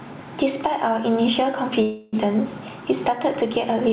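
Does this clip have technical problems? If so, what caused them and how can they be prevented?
Yes. Gain pumping runs throughout this speech. The gain ducks by around 10 dB under each loud syllable, unlike steady compression. The likely cause is input gain set far too high, forcing a fast limiter to clamp every peak. Lowering the microphone gain so the limiter rarely engages prevents it.

A call audio freeze runs from 1.82 to 2.15 s: the last sound is stretched into a fading buzz or hiss for about 0.31 s, then speech resumes where it stopped with nothing lost, unlike a dropout. Delayed packets likely emptied the jitter buffer. A steadier network connection or a deeper jitter buffer prevents it.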